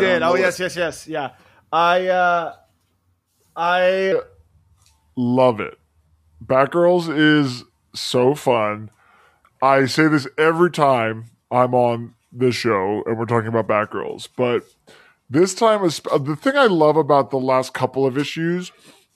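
A speech recording in which a section at the wrong speed begins at 4.12 s, just before "I feel like the", and runs to the end. From that point the audio plays at 0.849 times its proper rate, so the voice drops about three semitones and slows together, sounding deeper and dragged. This is likely a clock or sample-rate mismatch in playback or editing. On a spectrogram, harmonics and formants step downward at 4.12 s and sit closer together. The waveform's syllable envelopes look stretched out in time.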